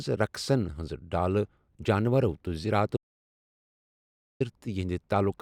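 At 2.97 s the speech cuts abruptly to total silence until 4.40 s. This audio dropout to silence lasts 1.44 s, likely because the input was lost while zeros kept being written. The waveform flatlines and the spectrogram goes blank, with no room tone.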